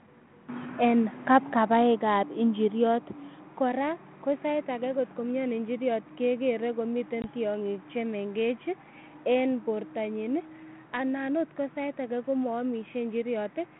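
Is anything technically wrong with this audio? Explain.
Yes. At 7.22 s there is packet loss on an ADPCM call, lasting to about 7.25 s, just before "tiong'ik che". About 20 ms of audio, which fits a single lost packet, drops out as a hard-edged silent gap. Because the G.726 stream (32 kbit/s, 150 Hz to 3.4 kHz band) codes only differences from an adaptive prediction, the receiver's predictor and step size no longer match the sender's when audio resumes. The sound comes back slightly distorted until the decoder re-converges.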